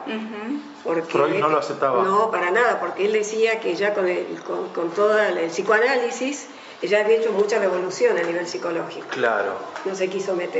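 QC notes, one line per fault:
Nothing stood out on listening; there is no fault to log for this clip.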